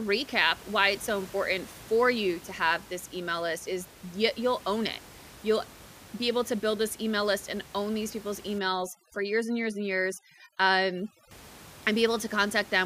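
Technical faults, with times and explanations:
8.59 to 11.31 s, overdone noise removal: after "and own these people's" the background collapses to twinkling specks as heavy suppression guts bands near the noise floor.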